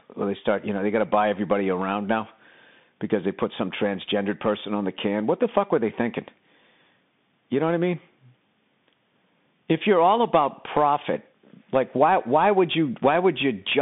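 Speech carried throughout over a Bluetooth CVSD headset codec, consistent with a 64 kbit/s one-bit link, confines the sound to roughly 150 Hz–3.6 kHz, nothing above 3.8 kHz, with scratchy sibilants and granular hiss.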